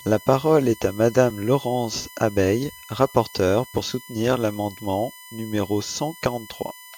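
USB whine runs through the whole clip: a steady fixed-pitch tone at 1 kHz with a ladder of harmonics reaching up to 20 kHz, where it is strongest, sitting about 20 dB below the speech. Current drawn in 1 ms bus frames is leaking into the audio through power or ground.

Audio missing between chunks occurs at 1.30 s, just after "parole est à", at 3.78 s, just before "soutenir l’amendement numéro", and at 6.26 s, right after "soutenir l’amendement numéro". Each is a brief skip of roughly 20 ms, with the two sides butted together without silence. The even spacing of about 2.5 s likely comes from the recorder processing in blocks of that length and dropping a sliver at each handover.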